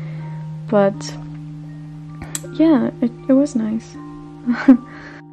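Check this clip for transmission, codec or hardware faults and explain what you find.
No transmission, codec or hardware fault can be heard anywhere in the audio; the signal stays continuous and stable throughout.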